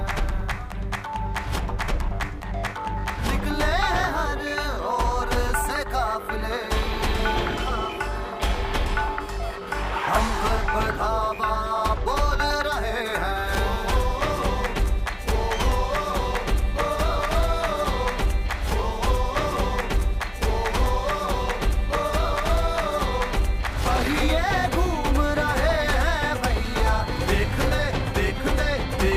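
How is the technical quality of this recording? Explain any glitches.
Nothing in the recording stands out as a technical glitch. No dropouts, clicks, distortion or other interruptions can be heard anywhere in the audio.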